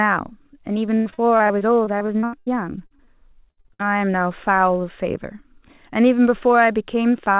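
From 0.86 to 2.48 s, repeated packet loss gives a robotic sound. Packets kept going missing. Each hole, the longest about 0.1 s, was patched by stretching the last sound, so about a third of the stretch is filled in and it sounds choppy.

Short concealed packet loss follows at 2.86 to 2.92 s, 2.96 to 3.00 s and 3.04 to 3.09 s. Each hole was filled from the preceding sound, leaving brief smears or wobbles.

Repeated packet loss returns from 3.51 to 3.86 s. About half of this span is filled-in sound, with gaps up to 63 ms, and it turns robotic again. Throughout, nothing is heard above 4 kHz, which fits a narrowband call codec.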